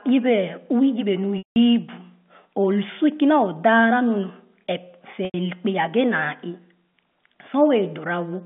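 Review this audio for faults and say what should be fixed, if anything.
Packet loss with pitch repetition occurs twice, at 1.38 to 1.56 s (about 180 ms lost) and 5.25 to 5.34 s (about 90 ms), over a narrow telephone band from 150 Hz to 3.5 kHz. At each gap the receiver loops the last pitch period, heard as a brief buzzy hold that fades over roughly 50 ms. In each gap it then drops to silence before sound cross-fades back in. A spectrogram shows frozen, flat harmonics followed by an empty band. The waveform shows identical repeating cycles decaying to silence. Add a larger jitter buffer, forward error correction or redundancy on the link to prevent these losses.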